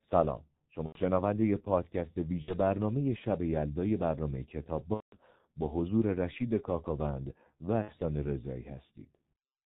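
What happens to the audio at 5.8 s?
At 5.8 s, as throughout the clip, a G.723.1 codec squeezes the speech into roughly 6 kbit/s with 30 ms frames, cutting everything above 4 kHz and leaving it muffled, hoarse and smeared.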